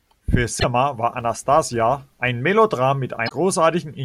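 At 0.59 to 0.64 s the speech breaks into a short glitch, caused by damaged data in a compressed stream. Corrupted bytes leave the decoder misreading frames until it resynchronises on a later frame header. From 1.17 to 2.29 s a 200 Hz buzz rides on the speech and rises and falls with its level. This is a filter restarted on every block. Each block starts from zeroed state and adds a small transient, which fits blocks of about 5 ms. At 3.25 to 3.32 s the same compressed-stream corruption returns as a second brief glitch.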